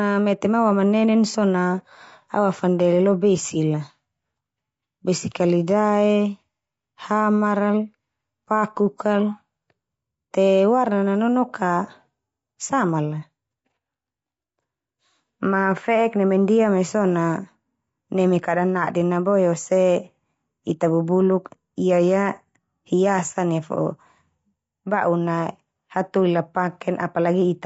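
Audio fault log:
throughout: low-delay AAC compression, likely AAC-ELD at a rate near 32 kbps; at this low bitrate coarse quantization leaves the speech rough and grainy with noise between harmonics.
1.31–1.36 s: AAC frame loss with concealment, one frame of about 30 ms dropped after "mete ma awamanenen"; the decoder patches it from the previous spectrum, producing a brief smeared, noisy blip before "na awafandele lo".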